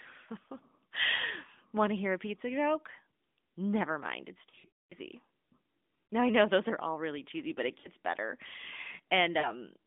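Lost AMR speech frames cause quick warbly dips at 1.16, 2.92 (after "hear a pizza joke"), 6.07, 7.80 and 9.40 s as the decoder patches the gaps. From 4.50 to 4.95 s, after "mind it's", the sound drags and fades out through a 0.22 s run of losses.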